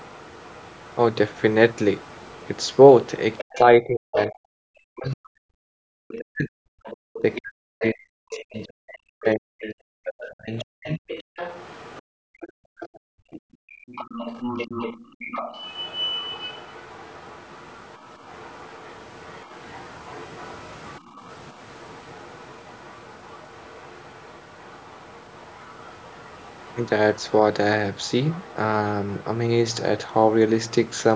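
From 0 to 5.12 s a faint second voice sits about 30 dB under the speech. This is other side's voice leaking through, likely far-end echo left behind by the echo canceller. It returns louder, about 15 dB down, at 6.08 to 7.39 s and from 8.32 s to 30.91 s.

Between 3.42 and 11.04 s the talker's speech dips and breaks up in pieces, at worst by roughly 40 dB. This is speech suppressed in double talk, likely the canceller ducking both sides while they overlapped. A brief repeat of roughly 25 dB comes at 12.94 s.

From 11.32 to 13.88 s the room tone drops by up to about 39 dB. This is background gated by the echo canceller while the loudspeaker played. Shorter dips follow at 15.05 to 15.19 s (about 23 dB) and 21.0 to 21.2 s (about 10 dB).

Throughout, the call microphone processing leaves nothing above 8 kHz.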